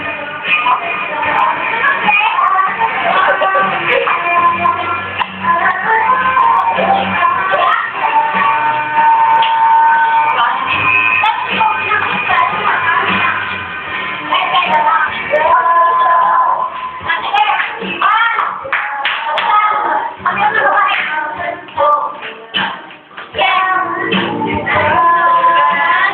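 Gain pumping runs through the whole clip: the level swings by around 10 dB, ducking under each loud sound, likely from input gain set far too high with a fast limiter pulling it down. The waveform looks flattened.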